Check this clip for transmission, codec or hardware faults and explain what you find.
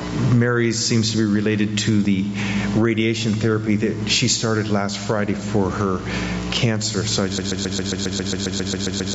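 Three faults stand out: gain pumping across the whole clip, a dropped buffer at 2.05 s, and a broken-record loop from 7.38 s to the end. The band stops at 8 kHz, as call microphone processing would leave it.

Gain pumping runs throughout. The level swings by about 20 dB, so loud and quiet passages sit unnaturally close and the sound feels squashed. The likely cause is a gain set far too high for the microphone, with a fast limiter or compressor clamping down on every peak. This differs from a noise gate: the floor never cuts to silence.

At 2.05 s a dropped buffer (overrun) produces a small jump forward in the audio. Roughly 5 ms of sound is missing, which likely means the program fell behind and the hardware overwrote samples before they were read. The two sides are spliced directly with no gap. That separates it from an underrun or packet loss, where a moment of silence or a fill sound would appear.

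From 7.38 s to the end, a broken-record loop takes over. A 135 ms fragment repeats exactly, back to back, thirteen times, and whatever should have played in that stretch never arrives. The likely cause is a stalled player, encoder or stream resending the last piece it held. The repeats are identical and continue to the end. That distinguishes it from an echo, which decays, and from a stutter that recovers.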